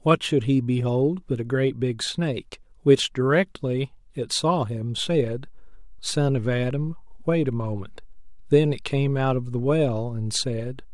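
Speech carries a DC step at 4.98 s: the waveform's zero line jumps by about -36 dBFS and holds there to the end, heard as a single low thump. On a waveform the trace visibly shifts off centre; a spectrogram shows one brief broadband low-frequency smear at that instant.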